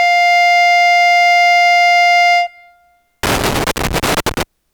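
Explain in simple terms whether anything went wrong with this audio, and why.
Something went wrong near the end of this music, from about 3.23 to 4.43 seconds: a loose connector crackle. A plug or socket in the signal path isn't making steady contact, perhaps because it's worn or dirty, so as it shifts it keeps connecting and disconnecting many times a second. Each break chops the music, and each reconnection can add a small pop. For just over a second you hear irregular scratchy crackling breaking up the sound.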